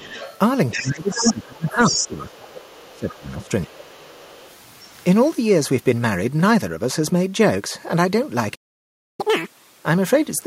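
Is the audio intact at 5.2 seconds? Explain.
Yes, the audio is intact at 5.2 seconds, with no audible fault at that moment.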